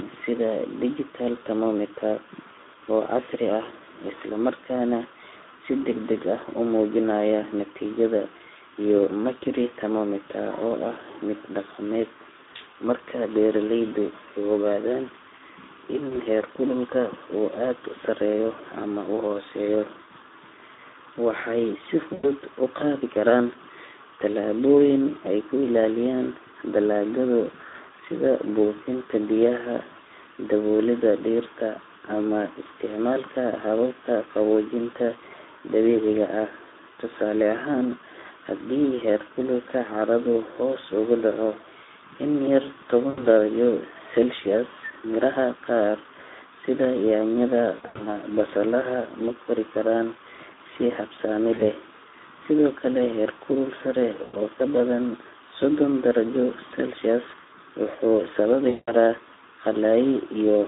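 Throughout, the speech sounds hoarse and grainy, confined to a telephone band of 300 Hz to 3.7 kHz. This is the Speex codec. Its CELP coding has too few bits to model the excitation cleanly, which points to a rate of around 11 kbps.

Brief buzzy smears that fade into coloured noise occur at 16.09 s, 22.13 s (after "waxay si"), 43.09 s, 47.75 to 48.06 s (before "basalaha ma kori"), 51.53 s, 54.23 s (before "oo ka") and 58.69 s. These are VoIP packet loss concealed by the speech codec. The decoder extrapolates its last pitch and filter across gaps of 20 to 180 ms, and the sound stays weak briefly afterward.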